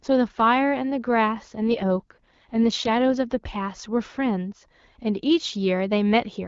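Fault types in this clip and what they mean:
AMR rate drop: from 1.56 to 3.18 s the speech turns rough and synthetic, with no gap and the same bandwidth. This fits a weak link pushing the AMR-WB coder from 12.65 down to 6.6 kbit/s and spending the freed bits on error protection.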